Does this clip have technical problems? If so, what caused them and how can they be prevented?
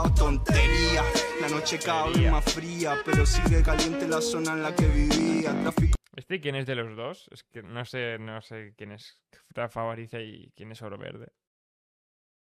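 No, there are no technical problems, and the fade-out toward the end at about 11.5 s is a smooth editorial fade rather than a fault.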